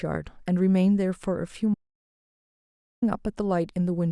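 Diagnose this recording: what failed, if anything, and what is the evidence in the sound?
Audio dropout to silence, 1.74 s to 3.02 s. The speech cuts off abruptly mid-flow and resumes just as suddenly, leaving about 1.28 s of silence with no room tone or noise floor underneath. The cause is likely at the input stage, a momentary disconnect or mute between the source and the recorder, while the recorder kept writing empty samples. Whatever was spoken in that span is unrecoverable.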